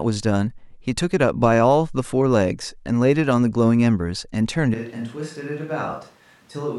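A speech recording that, from 4.74 s to the end, sounds like a switch to a distant microphone: the voice turns abruptly roomy and hollow, loses bass, drops by about 10 dB, and room noise rises to roughly 30 dB below the speech. The close microphone's feed was likely lost and replaced by one further away. A plain gain drop would lower the level without adding reflections or changing the tone.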